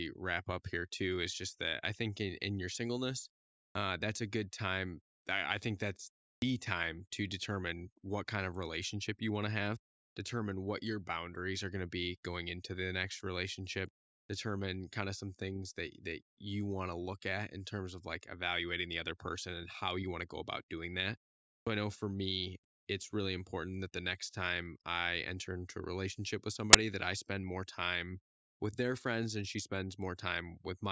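At 26.73 s the speech is interrupted by a very short burst of loud static, a case of file tags played as audio. A block of metadata, here the compressed bytes of an embedded cover picture, has been handed to the decoder and read as if it were sample values. Because compressed image data is close to random, it comes out as very loud white noise. The burst starts and stops with hard edges.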